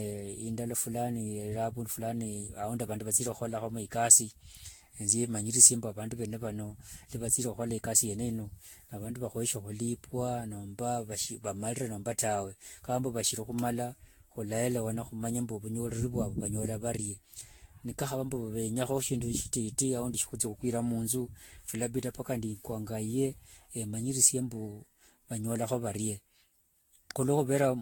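Throughout, the speech sounds swirly, hollow, smeared, likely generation loss from around ten Vorbis-like re-encodes; the spectrogram shows flickering holes and nothing above 19.2 kHz.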